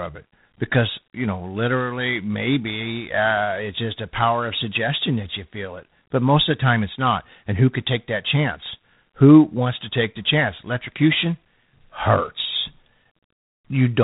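Speech coded as G.726 ADPCM at 24 kbit/s throughout, leaving a harsh rasping hiss that tracks the speech level and nothing above 3.8 kHz.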